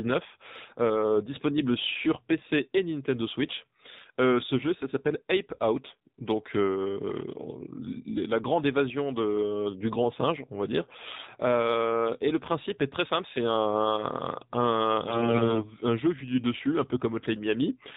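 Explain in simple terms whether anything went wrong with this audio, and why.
Yes, two things went wrong. The whole recording has passed through the AMR narrowband mobile codec, the speech format used on older 2G and 3G phone calls. It throws away everything above about 4 kHz, so the speech sounds muffled and phone-like. On top of that, it rebuilds the voice from a simplified model at a low data rate, which adds a buzzy, synthetic edge. Unlike a plain muffled recording, the voice itself sounds artificially reconstructed, not just dull.

The second fault is a burst of AMR bit errors, from 15.08 to 15.67 s, just before "jeu vu du dessus". A fair share of the less-protected data in each chunk arrived corrupted, probably from a weak radio link, so the decoder rebuilt the voice from wrong details. The pitch and loudness stay roughly the same, but the voice turns hoarse, scratchy and gargly. 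That sets it apart from a dropout, where the sound would go silent or repeat instead of continuing in a damaged form.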